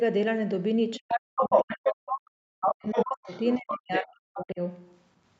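Speech from a call in which the other side's voice leaking through can be heard at 0.95–1.89 s, 2.11–2.18 s, 2.64–3.73 s and 4.36–4.41 s. It is a second talker rather than noise or reverb, louder than the main talker at first and fainter later, likely from loudspeaker echo the canceller left behind. Speech suppressed in double talk appears at 0.99–1.07 s, 1.39–3.33 s and 3.56–4.6 s. The main voice drops very deeply while the other side is talking, likely because the echo canceller muted both. Unlike packet-loss gaps, these dips follow the overlapping talk.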